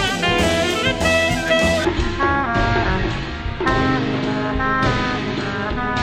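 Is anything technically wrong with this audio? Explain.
Yes. From 1.85 s to the end, a section at the wrong speed plays at 0.53 times its proper rate. The shift is likely a playback or edit step reading that stretch against the wrong clock, so everything is drawn out and drops roughly ten semitones, sounding deep, sluggish and heavy. Unlike a plain pitch shift, timing slows along with pitch, and unlike gradual tape drift, the change lands abruptly at 1.85 s and then holds steady.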